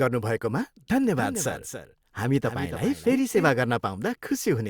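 From 1.17 s to 3.49 s the speech carries a doubled audio track: a second, full-band copy trails the original by around 300 ms, roughly 10 dB quieter, with no decay or room colour, and cuts in and out abruptly, likely from a second, slower capture path.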